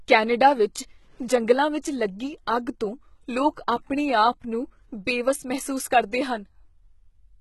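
The whole clip has heavy HE-AAC compression, likely. The treble is rebuilt from copied lower bands, so sibilants sound gritty and metallic. Nothing sounds above 11.8 kHz, which fits a bitrate near 16 kbps.

At 1.82 s, between "ਕੈਨੇਡਾ ਵਿੱਚ ਜੰਗਲਾਂ" and "ਲੱਗੀ ਅੱਗ ਤੋਂ", there is pre-echo. Block noise leaks 16 ms ahead of an attack, adding brief hiss and smearing it.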